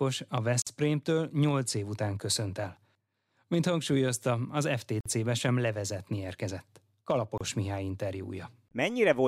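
A speech recording with three gaps at joins of encoded pieces. Silence drops into continuous sound from 0.62 to 0.67 s, for about 49 ms. It happens again from 5.01 to 5.06 s, for about 50 ms, and from 7.38 to 7.41 s, for about 29 ms. Each gap has edges smeared by the codec. The speech then resumes where it stopped. Separately encoded segments were joined untrimmed, so encoder start delay and final-frame padding remain.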